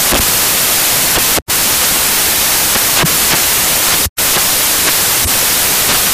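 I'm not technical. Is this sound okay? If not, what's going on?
No. From start to finish this speech clip suffers from samples built from the wrong bytes. Each audio sample is stored as a couple of bytes, and here they have been put back together in the wrong order or offset by one. The tiny, fast-changing detail ends up treated as the main part of the signal, so what you hear is loud hiss like white noise.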